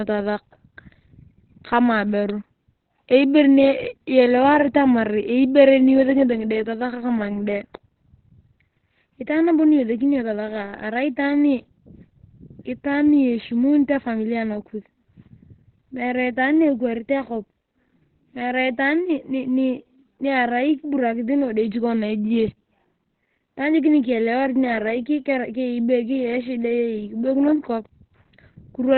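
From start to finish the speech sounds muffled and hoarse, and nothing comes through above 4.2 kHz. That's likely Opus compression dropping into its narrowband SILK speech mode, and the heavy damage fits a very low bitrate, around 12 kbps.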